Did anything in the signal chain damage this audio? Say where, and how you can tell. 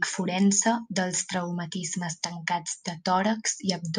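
Yes. A short burst sits in the speech from 1.13 to 1.15 s, a burst of misplaced energy peaking around -25 dBFS. This points to the codec stage: a corrupt frame was decoded. Flipped bits in a couple of compressed frames produced wrong gains or codes, putting energy at the wrong frequencies.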